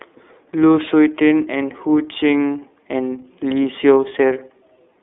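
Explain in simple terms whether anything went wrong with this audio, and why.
The whole clip passed through the iLBC codec, a phone-call compressor, which discards everything above 3.8 kHz, leaving the speech muffled and plainly rough and synthetic.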